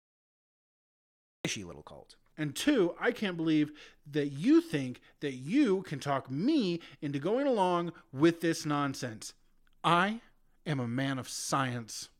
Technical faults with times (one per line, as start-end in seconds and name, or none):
0.00-1.45 cut-off start